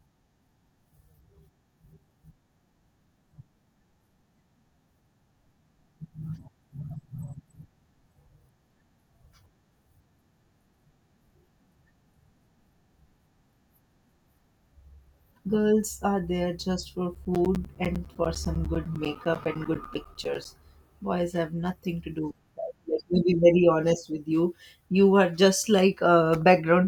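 From 17.15 to 20.45 s, just after "are there just for", the speech is interrupted by periodic USB or driver dropouts: every 0.1 s something stalls the audio path and roughly 10 ms of signal is replaced by silence, about thirty times in all. The result is a steady train of ticks at ten per second over the speech. On the waveform these show as evenly spaced flat gaps; on a spectrogram, as thin vertical breaks with broadband clicks at each edge.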